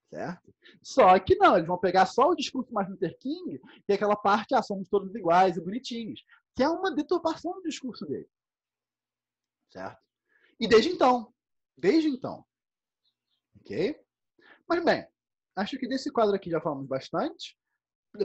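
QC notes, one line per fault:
No faults heard anywhere in the audio.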